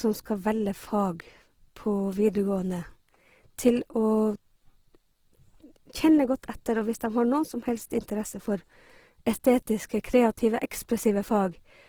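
Across the whole recording the speech sounds grainy and rough, with a noisy fizz riding on voiced sounds instead of the watery swirl MP3 leaves. The likely cause is Opus compression in its music mode, which fits a bitrate near 16 kbps; bandwidth stays wide, reaching about 20.3 kHz.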